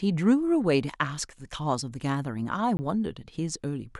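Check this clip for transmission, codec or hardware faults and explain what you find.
One fault is present. From 2.77 to 2.79 s the speech drops into a block of digital silence lasting 20 ms. The samples are zeroed, likely because the output buffer was not filled in time, and the silent block is heard as a short hole.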